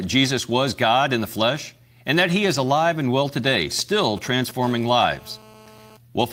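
At 2.53 to 2.55 s, just before "alive and well today", a lost packet rebuilt from error correction leaves 20 ms of rougher, noisier speech; the spectrogram shows a brief, smeared band.

From 3.79 to 4.66 s, after "alive and well today", GSM signalling bursts from a nearby 2G phone are rectified into galloping ticks and short 217 Hz buzzes, roughly 15 dB below the speech. They appear as clustered vertical stripes and periodic spikes on the waveform.

From 4.66 to 5.97 s, GSM phone buzz from a handset in a call sounds as a steady, raspy 217 Hz drone about 25 dB down, showing as evenly spaced harmonic lines across the spectrogram.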